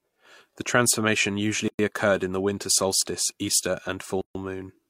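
A gap at a join of encoded pieces opens at 1.68 to 1.79 s, a silence of about 109 ms just before "occurred in the winter", and again at 4.21 to 4.35 s, about 138 ms. The speech was encoded in separate segments and spliced untrimmed, so each run's start-up delay and padded final frame remain as dead air. Each time, the speech drops out abruptly, with smeared edges, then resumes exactly where it broke off.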